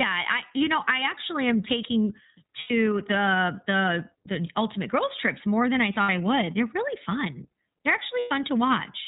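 From the start the whole clip runs through the iLBC codec. It's narrowband, so nothing above 4 kHz survives, and the speech comes out clear but a bit rough and synthetic, which fits the 13.33 kbps mode with its 30 ms frames. Then there are lost iLBC frames at 2.60 s for about 90 ms, at 6.03 s for about 60 ms, and at 8.19 s for about 120 ms. Each gap sounds like a held, slightly buzzy vowel as the decoder repeats the last pitch cycle with noise, and the voice comes back right away.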